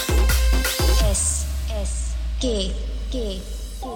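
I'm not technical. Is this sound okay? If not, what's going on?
Yes, this sound is okay, and nothing is going wrong in it.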